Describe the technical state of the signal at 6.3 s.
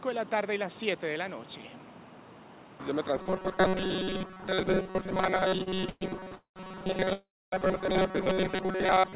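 At 6.3 s the audio carries a robotic sound from repeated short buffers, running from 3.17 s to the end at 9.16 s. It is likely caused by new audio arriving too seldom, so a tiny slice of about 5.3 ms is replayed in place of skipped material. That locks a rigid metallic buzz near 188 Hz onto most of the sound.

The same moment falls inside repeated stalls (stutter), from 5.56 s to 6.33 s. The jitter buffer ran dry seven times. Each gap was bridged by continuing the last sound, 232 ms in all, the longest 119 ms. Nothing is lost, but the audio drags and catches, and about 30% of that stretch is filled-in sound.

Straight after, from 6.35 s to 6.58 s, comes a call audio freeze. Its likely cause is packets held up in transit. The receiver extends the last sound and fades it, with about 120 ms of silence, and then resumes where it stopped. That inserts 206 ms of delay while dropping nothing. 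Above all this, the narrowband call codec leaves nothing above 4 kHz.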